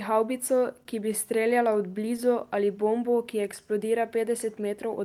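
From 0.83 to 0.87 s, just before "ki bi", there is a short stall from a late packet. The buffer emptied, so 16 ms of sound is held too long, with nothing lost.

Between 1.51 and 2.20 s, after "havbico ki bi", come scattered short gaps. About four small holes, none longer than roughly 10 ms, were patched by extending the preceding sound. They give brief ticks or smears.

From 2.65 to 4.03 s, a jitter buffer slow-down stretches the audio by 83 ms. Repeated pitch periods slow it to 94% speed, drawn out at unchanged pitch.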